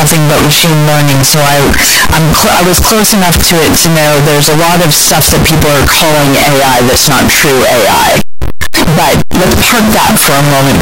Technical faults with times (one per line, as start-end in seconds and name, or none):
0.00-10.82 float read as integer